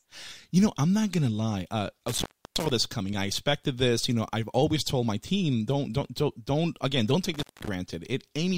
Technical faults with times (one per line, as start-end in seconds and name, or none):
2.08-2.70 intermittent contact
7.34-7.68 intermittent contact